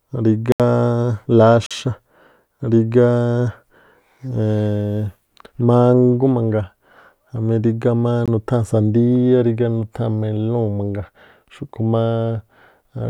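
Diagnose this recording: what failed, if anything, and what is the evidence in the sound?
The output buffer failed, giving blocks of digital silence in the speech. The sound drops out at 0.52 to 0.60 s, 1.66 to 1.71 s and 8.26 to 8.28 s. The 43 ms gap fits a 2048-sample buffer left unfilled.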